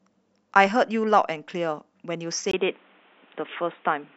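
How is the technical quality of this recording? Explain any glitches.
The recording has one clear glitch, from 2.51 s to the end. Input switched to a poorer device: after a brief gap of about 20 ms, the speech turns dull and boxy, with nothing above 3.8 kHz, a level shift of about 5 dB, and new background noise sitting roughly 35 dB below the voice. The likely cause is the system changing microphones mid-recording, perhaps to a headset's call profile, whose narrower band and own noise replace the original input.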